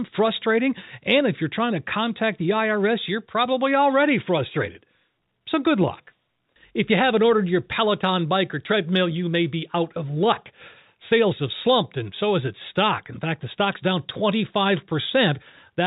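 No technical faults can be heard in this recording.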